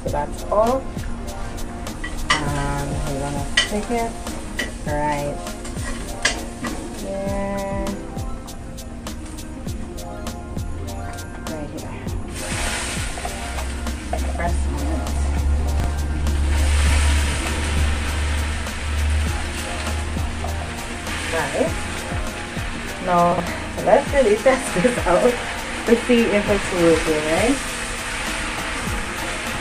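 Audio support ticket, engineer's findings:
Chunks out of order at 15.8 to 15.86 s: brief jumbled stutter. A 20 ms chunk lands two chunks late. The probable cause is a reordering fault in the jitter buffer or write queue. Waveform shows three hard joins; the spectrogram shows thin vertical broadband lines.

Chunks out of order at 23.32 to 23.4 s: the same garbled skip, a 20 ms chunk arriving three chunks late. Same component. No gap or lost audio, just misplaced segments with step discontinuities at each splice.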